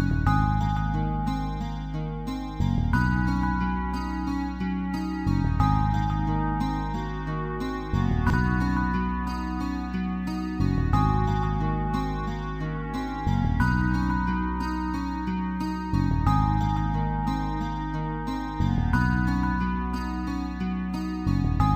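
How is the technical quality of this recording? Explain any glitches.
No audible glitches or faults.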